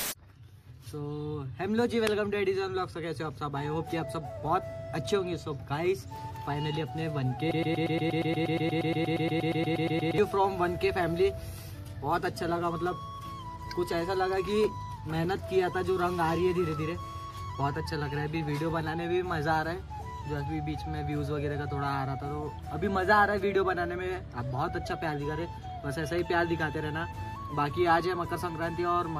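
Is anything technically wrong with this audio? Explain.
Yes. A broken-record loop runs from 7.51 to 10.18 s. A fragment of about 118 ms repeats back to back 23 times, most likely because playback or the stream stalled and kept resending its last held piece. It stutters mechanically, and the audio meant for that span is missing.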